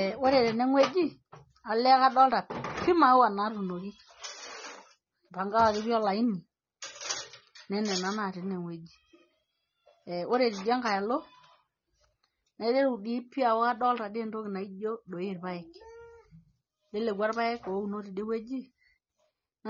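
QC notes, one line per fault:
Throughout, AAC compression: the speech sounds dull and smeared the whole way, with the top end rolled off and a warbly, fizzy edge on sustained sounds and sibilants. That's the likely result of AAC-LC working at a starved bitrate, which fits something around 24 kbps. The encoder drops the cut-off and quantises its frequency lines so coarsely that gaps open in the spectrum or get filled with substitute noise, hence the swirly texture.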